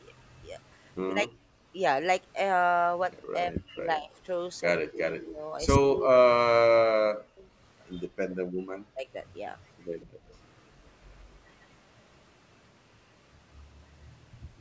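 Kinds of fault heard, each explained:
Speech suppressed in double talk: The voice dips or cuts out in pieces at 1.12, 3.32, 4.81 and 8.15 s. The first dip is small, roughly 10 dB. Later ones run up to a second or more and fall by around 40 dB. This is likely an echo canceller hearing both sides at once and turning everything down.
Background gated by the echo canceller: The room sound drops out briefly while far-end audio plays. A short dip of about 8 dB comes at 1.57 s. A deeper one of about 32 dB follows at 10.06 s and lasts roughly a third of a second before the canceller lets go.
Echo leak: A faint delayed copy of the sound slips through at 10.0 s, arriving 146 ms late and sitting around 30 dB below the speech. It is likely loudspeaker pickup the far side's echo canceller failed to remove, then sent back.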